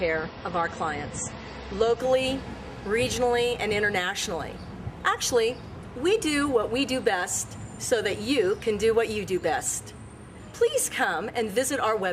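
An adaptive stream starting at a low bitrate accounts for the opening 2.0 s: the player began on a cheap version of the stream so playback could start at once, then switched up after gauging the connection. Until 2.0 s nothing reaches above about 8.3 kHz, so the top end sounds dull and smeared, with obvious coding artefacts, which fits MP3 at around 32 kbit/s. At 2.0 s the quality jumps without any gap, consistent with a step to roughly 128 kbit/s.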